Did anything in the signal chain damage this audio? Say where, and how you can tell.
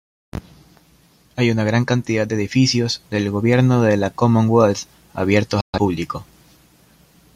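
Yes. At 5.61 s the speech drops out in a digital broadcast dropout and returns at 5.78 s. The receiver stopped getting decodable frames and muted, with a fade of only about 3 ms, so the sound vanishes almost at once and what was sent during the gap is gone. The length fits about three lost frames. On a waveform this is a flat line, and on a spectrogram it is a clean vertical blank band across all frequencies.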